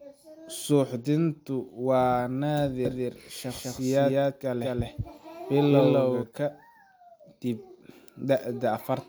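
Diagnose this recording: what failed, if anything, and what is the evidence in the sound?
A doubled audio track runs from 2.85 s to 6.23 s, most likely because the speech was picked up a second time through a slower capture or monitoring path at the driver or buffer stage. A second full-band copy trails the original by about a fifth of a second, at roughly the same loudness, producing a hard slapback on every syllable. It has no decay or room colour, and it cuts in and out abruptly at those two times.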